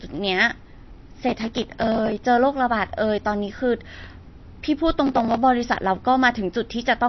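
Throughout, the speech sounds like it is likely squeezed through low-bitrate MP3 compression. Nothing survives above 5.9 kHz, and the weak detail that remains flickers from frame to frame. The result is dull and watery, with swirling, chirpy sibilants and softened attacks.

From 1.29 to 2.27 s, and again from 5.07 to 5.37 s, the processor falls behind on very short audio buffers, under a millisecond each. It misses dozens in a row and skips them outright. That is processor overload crackle, a gritty tearing laid over the speech.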